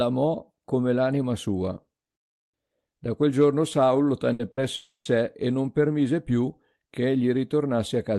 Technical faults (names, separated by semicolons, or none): burst of packet loss; long network dropout